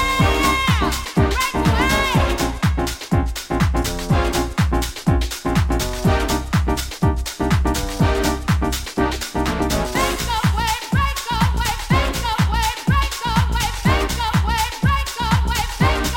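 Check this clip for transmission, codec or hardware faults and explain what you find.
Nothing here sounds like a transmission, codec or hardware problem to me; the audio just carries on steadily with nothing breaking in or dropping out.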